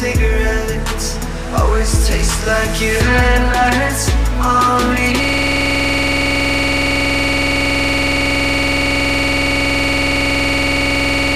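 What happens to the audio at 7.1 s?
At 7.1 s the audio is stuck in a system hang loop that began at 5.24 s and runs to the end of the clip. The system froze while the sound hardware kept replaying the same ring buffer, so one 46.4 ms slice, which fits a 2048-sample buffer, repeats exactly at 21.5 Hz and sounds like a rough, steady buzz. A waveform shows one identical block tiled end to end, and a spectrogram shows evenly spaced repeating vertical stripes.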